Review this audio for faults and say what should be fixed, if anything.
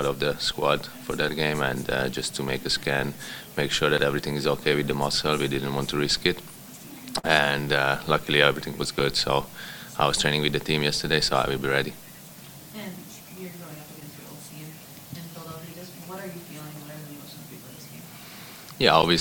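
Short concealed packet loss occurs at 7.19 to 7.25 s. About 40 ms of audio never reached the decoder in time, so the receiver extended the preceding sound and blended back, giving a brief smear or wobble. On a spectrogram, that span shows stretched, unnaturally steady harmonics or flat shaped noise.

A larger jitter buffer or forward error correction on the link would prevent it.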